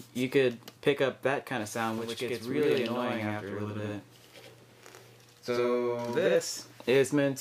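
From about 1.98 s to 6.35 s there's a channel delay causing doubling. One channel falls behind the other by roughly 85 ms, which fits a 4096-sample buffer, and when the two get summed to mono you hear the late copy as its own event: a slap echo trailing everything at the same level as the original. That gap is too long to blur into a single sound, so it comes across as a distinct double.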